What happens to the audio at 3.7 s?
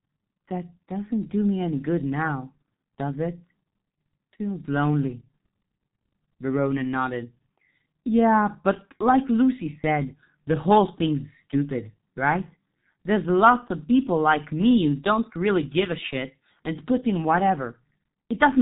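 At 3.7 s the speech carries G.723.1 codec damage, present throughout the clip. Nothing passes above 3.8 kHz, and the slowly updated voice model smears each frame. The heavy loss fits a rate near 6 kbit/s. The speech sounds muffled and hoarse, with blurred consonants.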